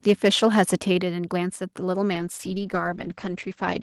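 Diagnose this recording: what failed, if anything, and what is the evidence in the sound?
The input stage was likely driven too hard, so the loudest peaks ran past the converter's full-scale limit by about 6 dB, from 0.08 to 0.75 s. This is microphone overload: the tops of those waveforms are flattened, affecting a small fraction of samples, around one to two percent. The speech there carries a harsh, crackly edge on its loudest syllables, and the squared-off peaks add distortion the talker never produced.

The call processing likely reacted to that overload by cutting the microphone's input gain in a single step at 1.02 s. This microphone volume stepped down by about 5 dB, and it shows as an abrupt drop in level rather than a gradual fade. The speech and the room tone behind it fall together, and the drop comes shortly after the clipped passage. That sequence points to an automatic gain correction rather than a change in the talker's delivery.

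From 2.13 s to the end, the network's bandwidth estimate fell and the codec was pushed from 32 kbps down to 10 kbps. It stayed at that floor for about 1.4 s. With this call bitrate drop, the encoder quantises more coarsely and narrows its audio band from 20 kHz to 8 kHz. The speech loses its crisp top end and turns muffled and rough, with a watery texture, through the rest of the clip.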